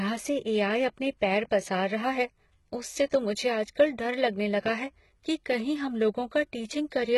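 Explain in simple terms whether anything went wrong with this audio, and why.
HE-AAC compression, running from start to finish, is the likely cause of the gritty, metallic hiss on the s sounds in this speech. To save data, the codec kept only the lower tones and rebuilt the treble by copying them upward, so the highs sound artificial.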